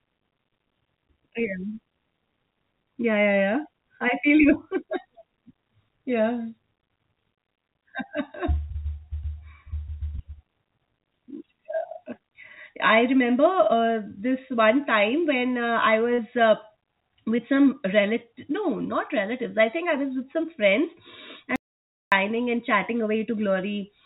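Short concealed packet loss occurs at 16.14 to 16.20 s, just after "time when uh I", and at 17.36 to 17.40 s, just before "some relative no not". About 40 ms and then 20 ms of audio arrived too late, so the receiver extended the preceding sound and blended back, leaving a brief smear or wobble.

An audio dropout to silence runs from 21.56 to 22.12 s, between "was with some friends" and "and chatting". For about 0.56 s the sound cuts to silence with no room tone, likely from a momentary loss of the input while recording continued.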